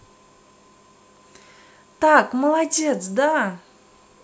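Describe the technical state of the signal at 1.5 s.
No technical fault is present at 1.5 s; the signal is intact at that moment.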